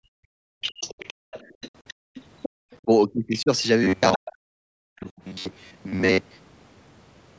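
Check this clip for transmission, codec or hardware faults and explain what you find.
Several faults stack up in this speech clip, mostly echo-canceller trouble plus a stretch of robotic sound.

Background gated by the echo canceller: at 0.01–0.61, 1.14–1.31, 1.94–2.15 and 2.49–2.56 s, the canceller clamps the mic while the loudspeaker plays, so room tone dips by about 38–39 dB.

Other side's voice leaking through: from 0.61 to 2.77 s and again at 4.13–4.30 s, a second voice sits about 15 dB under the talker, likely residual echo the canceller missed.

Speech suppressed in double talk: at 2.84–3.50 s the talker drops by about 25 dB, and at 4.17–5.21 s by about 40 dB, likely both sides talking at once, so the canceller turned everything down.

Robotic sound from repeated short buffers: 3.84–6.48 s turns into a metallic buzz at 93.8 Hz, likely most of the audio being a repeated chunk of about 10.7 ms.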